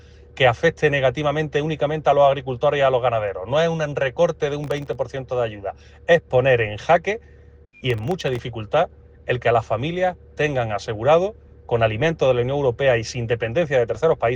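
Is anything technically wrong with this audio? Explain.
Yes. Processor overload crackle occurs at 4.64–4.95 s and 7.90–8.39 s. The processor repeatedly missed deadlines for very short buffers, which fits buffers under a millisecond. Each miss drops in a sliver of silence, so the sound tears into a gritty crackle until the load eases.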